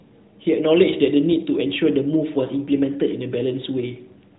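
Nothing in this speech recording stood out as a technical fault on listening.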